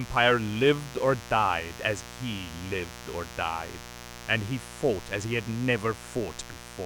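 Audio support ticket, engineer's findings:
Mains buzz, 60 Hz, present throughout the speech. Steady raspy buzz roughly 15 dB under the voice. Probable source: dimmer, rectifier or unshielded cable injecting switching spikes twice per mains cycle, spreading harmonics into the kHz range.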